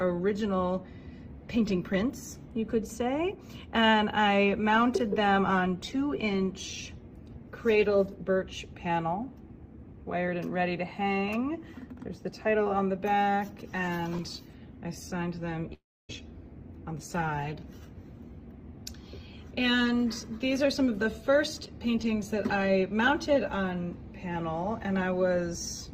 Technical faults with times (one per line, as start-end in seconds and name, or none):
15.73-16.11 long network dropout